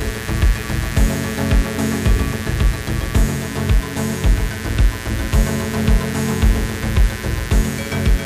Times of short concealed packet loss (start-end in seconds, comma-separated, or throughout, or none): none